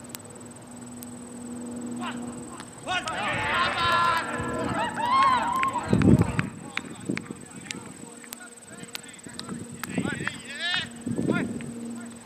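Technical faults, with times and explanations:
0.15 to 12.23 s, word clock ticks: About a hundred sharp ticks recur roughly every 0.15 s. The receiving device runs on its own unlocked clock, off by around 200 ppm. Each time the clocks slip, one sample is dropped or repeated, clicking through the sound.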